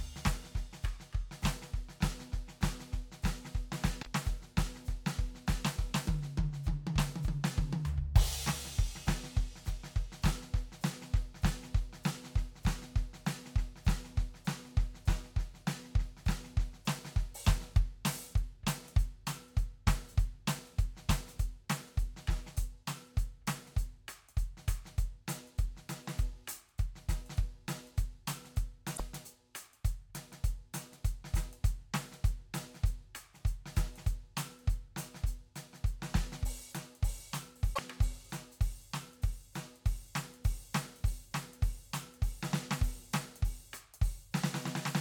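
Damaged data in the compressed stream makes the decoder misread corrupt frames and lose sync, so the music briefly breaks up at 3.99–4.07, 28.93–29.00 and 37.71–37.79 s.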